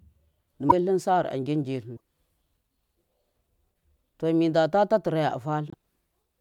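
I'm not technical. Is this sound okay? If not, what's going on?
No. The speech has three brief glitches, at 0.69 to 0.73 s, 1.96 to 2.00 s (just after "sar agin ji"), and 5.70 to 5.74 s. Each is a short blip where the sound skips ahead. The likely cause is a broken MP3 bit reservoir. Some compressed blocks of the file went missing, and the next blocks reached back for data that was no longer there. Each glitch lasts about two 24 ms frames.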